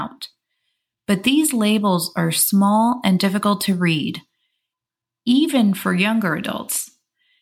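A speech clip with one sharp click at 2.36 s, right after "labels are", most likely dropped samples: a tiny sliver of the stream goes missing and the waveform jumps.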